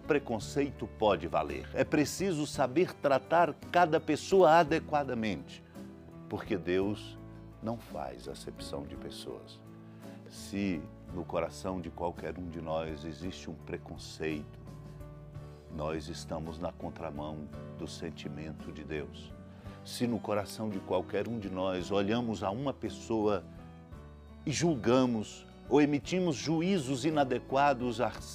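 From 18.38 s to 26.38 s a faint, gritty, inharmonic fizz rides on the louder and brighter sound, sitting roughly 40 dB below it. This is crude rate conversion: linear interpolation without filtering, which fits a 48 kHz to 44.1 kHz change, creating stray tones.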